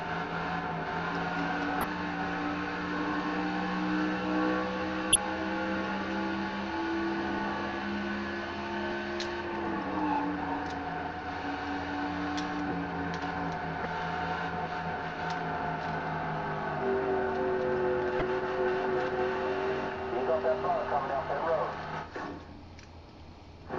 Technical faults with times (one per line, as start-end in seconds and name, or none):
1.80-1.84 damaged data in a compressed stream
5.12-5.16 damaged data in a compressed stream
8.88-8.92 damaged data in a compressed stream
13.82-13.86 damaged data in a compressed stream
18.18-18.22 damaged data in a compressed stream